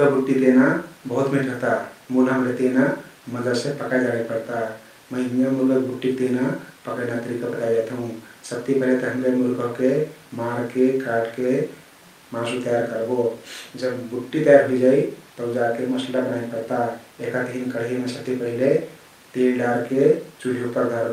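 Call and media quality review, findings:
No audible faults detected.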